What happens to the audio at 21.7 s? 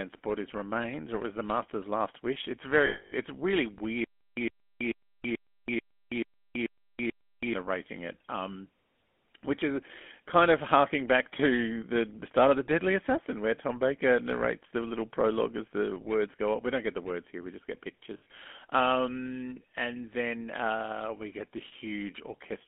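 Lost GSM frames from 21.68 to 21.73 s: about 40 ms of data, which fits two 20 ms frames, never arrived. The decoder repeated the last good frame, giving a brief rough, metallic ring rather than a gap. Throughout, the GSM full-rate codec's pulse-driven vocal-tract model makes the speech buzzy and gravelly, with everything above 3.4 kHz removed.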